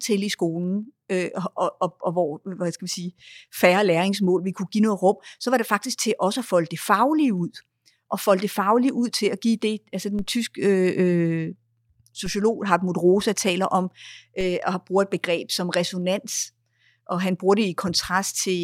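At 10.19 s, just after "at give det altså", the speech picks up a DC step: the waveform's zero line jumps by about -25 dBFS, heard as a low thump. The offset then decays, as through a high-pass near 5 Hz. A second step of about -25 dBFS follows at 12.26 s, and a third of about -24 dBFS at 14.41 s, between "taler om" and "øh og har brugt". Each gives the same thump and decay while the speech continues unchanged.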